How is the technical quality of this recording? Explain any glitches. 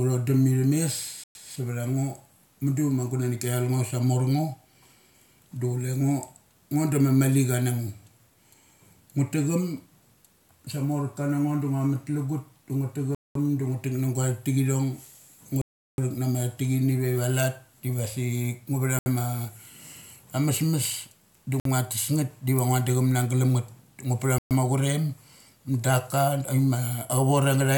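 The speech is broken by six short dropouts to silence. They occur at 1.24 s (114 ms), 13.15 s (206 ms), 15.61 s (366 ms), 18.99 s (71 ms), 21.60 s (54 ms) and 24.38 s (124 ms). Each is a Bluetooth stall, likely caused by interference delaying packets until the receiver's buffer ran empty. The audio cuts out abruptly and then resumes.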